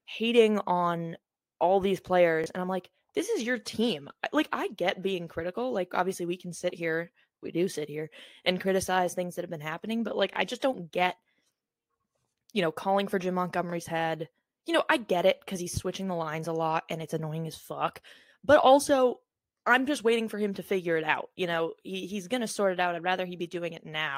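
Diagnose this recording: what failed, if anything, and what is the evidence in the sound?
Three short stutters, each a 23 ms fragment played twice with a hard join: at 2.44 s after "hating on all these", at 10.33 s before "just don't get", and at 13.70 s. This is a repeated buffer at the driver or buffer stage. New audio arrived late, so the last block, which fits a 1024-sample buffer, replayed.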